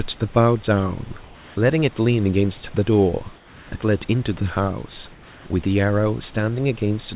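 At 1.24 to 1.56 s, 3.36 to 3.72 s and 5.12 to 5.46 s the pauses lose their real room texture and turn into flat, featureless hiss about 2 dB quieter. That's comfort noise in place of the background, likely from discontinuous transmission on a narrowband call path capped at 4 kHz.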